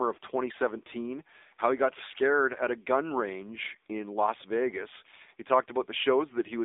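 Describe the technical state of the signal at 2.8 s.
At 2.8 s the speech carries AMR narrowband mobile codec damage, present across the whole clip: the vocal-tract model and sparse pulses sound buzzy and synthetic, which fits a low mode near 7.4 kbps, and the band sits around 300 Hz to 3.7 kHz, with nothing above 3.8 kHz.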